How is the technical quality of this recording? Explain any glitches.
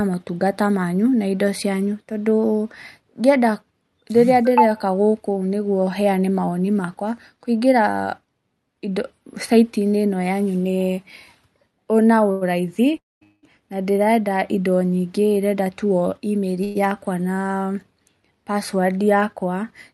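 The speech carries several network glitches between 12 and 17 seconds. It travels through a call codec whose high end stops near 12 kHz, which fits Opus at around 64 kbps.

A short stall from a late packet occurs at 12.31–12.43 s. The packet arrived late, the jitter buffer ran dry, and the receiver stretched the last sound for 99 ms until it came. The result is a held sound with a slight buzz or dip, and nothing is lost.

Call audio freezes occur at 12.97–13.23 s, 13.23–13.45 s and 16.64–16.77 s, likely from packets held up in transit. Each time, the receiver extends the final sound as a fading buzz or hiss. The first freeze falls mostly silent for 210 ms, and the second, running straight on, lasts 194 ms. The third is a 108 ms fill with no silence. The speech then resumes where it stopped, so the audio gains gaps but loses no content.

A jitter buffer speed-up runs from 15.37 to 16.58 s, just after "ndĩrenda indo nyingĩ". 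The buffer held surplus audio, so the receiver cut many tiny pitch-period slices, about a tenth of a second in total. Speech plays at 109% speed with unchanged pitch and sounds hurried.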